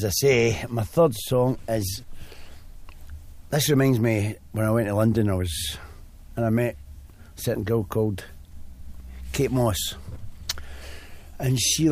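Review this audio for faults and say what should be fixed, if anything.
Nothing needs fixing, as the signal holds steady throughout with no audible faults to correct.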